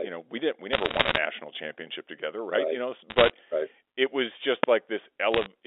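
Telephone speech over a G.711 line shows bit errors on a digital phone line: sharp ticks and crackle from flipped bits at roughly a one to two percent error rate, at 0.73–1.18 s (between "know we didn't we" and "championship together right right"), 3.10–3.30 s (before "right it was") and 5.34–5.46 s. At 4.64 s, just after "right it was", invalid numbers at full scale in a 2.67 ms block produce one loud bang.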